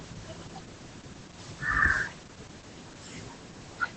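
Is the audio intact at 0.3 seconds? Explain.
No. Opus voice compression runs throughout, coding speech coarsely at what sounds like about 10 kbps, so it is muffled, hoarse and robotic, not merely dull, with nothing above 8.7 kHz.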